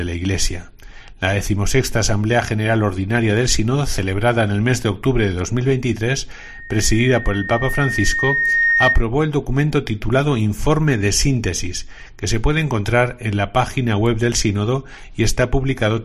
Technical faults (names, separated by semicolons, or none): loudspeaker feedback squeal